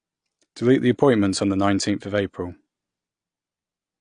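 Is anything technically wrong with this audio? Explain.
Yes. Throughout the speech there is AAC compression damage, and it is plainly audible. Nothing sounds above about 9.8 kHz, so the top is dull. Sibilants fizz and sustained sounds warble. This is likely a low-bitrate AAC-LC encode, around 32 kbps, lowering the cut-off and thinning bands.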